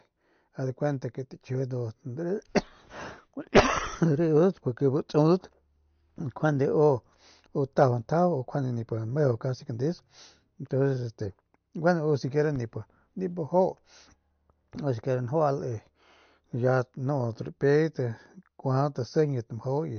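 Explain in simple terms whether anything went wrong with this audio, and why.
MP3 compression damage runs throughout the speech: nothing above 6.5 kHz, so it sounds dull and watery, likely because the encoder lacked bits and discarded treble and quiet detail.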